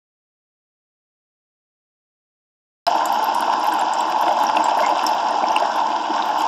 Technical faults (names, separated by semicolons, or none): audio dropout to silence